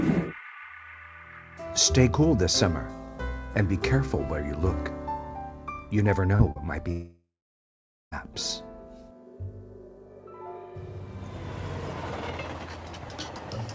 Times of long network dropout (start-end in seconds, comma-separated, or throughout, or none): 6.91-8.14